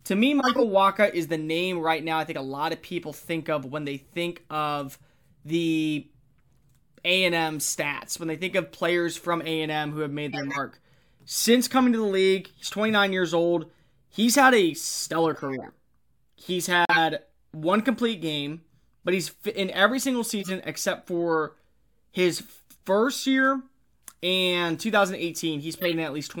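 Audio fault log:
0.39–0.64 s, 10.30–10.58 s, 15.33–15.69 s, 20.40–20.50 s, 25.75–25.94 s: corrupt frame decoded. Damaged compressed frames were played rather than rejected. The decoder read wrong gains or codes and placed energy at frequencies unrelated to the speech, producing chirpy, squeaky bursts. Each burst covers a handful of frames, from about two up to around seven. The first burst is the loudest, peaking near about −5 dBFS. The last peaks near about −10 dBFS, and the middle three near about −20 dBFS.
16.85–16.99 s: corrupt frame muted. The decoder rejected three damaged frames in a row, and the player filled their slot with silence. The speech cuts out abruptly and leaves a hole of about 0.14 s, which fits frames of roughly 46 ms each. The speech resumes on time afterwards because the gap keeps the timing intact. There is no smearing or skipping around it.
23.45 s: bit error spike. 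A single flipped bit struck two adjacent samples. Their values jumped by a power of two and then snapped straight back. Because the error is so brief, its energy spreads across the whole spectrum. The result is one sharp, isolated tick that has nothing to do with the surrounding speech and lasts only a fraction of a millisecond.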